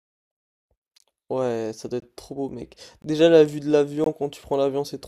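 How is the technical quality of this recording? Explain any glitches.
The speech is broken up by a regular glitch, a gap between chunks, four times: 0.98 to 1.00 s, 2.00 to 2.02 s, 3.02 to 3.04 s and 4.04 to 4.06 s. Each is a 20 ms dropout, landing about once a second. That rhythm suggests the audio was handled in 1-second chunks with a little silence inserted at each join. Nothing seems to be missing, but the flow gets a small, evenly spaced stutter.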